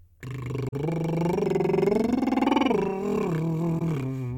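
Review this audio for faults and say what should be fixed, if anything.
Faults at 0.69–0.73 s and 3.78–3.82 s are corrupt frame concealment: the decoder caught damaged AAC frames and masked them, roughly two frames, then one. Protect the stream with error checking or retransmission.

From 1.45 to 2.46 s the music runs 6% slow and 107 cents flat, then snaps back, likely a drift correction step changing rate to rebalance the buffer. Resample continuously in small increments instead.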